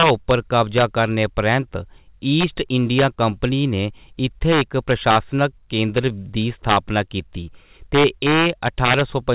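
Integer overflow cracks show up at 0.00–0.31 s, 0.78–0.83 s, 2.41–2.44 s, 2.99–3.04 s (right before "कंपनी ने"), 4.52–5.16 s, 5.98 s, 6.69–6.76 s and 7.95–9.01 s. Peaks driven about 1 to 5 dB past full scale wrap around to the opposite sign instead of being limited. That produces harsh snaps far sharper than clipping, and they're worst in the final stretch. Through the call path, nothing gets past 4 kHz, which fits G.711 mu-law.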